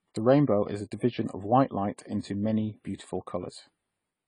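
From the start to the end, the speech has channel delay causing comb filtering. One channel arrives a few samples late, about 0.07 milliseconds. When both are summed, the shared sound cancels at spaced frequencies. The first notch sits near 7 kHz, so it sounds phasey.

Also throughout, nothing remains above 10 kHz, and the artefacts of the earlier encoding remain. The MP3 file is likely low-bitrate audio saved at a high bitrate. The sound fits a lean AAC encode near 24 kbit/s, later saved at 320 kbit/s, which cannot restore the lost detail.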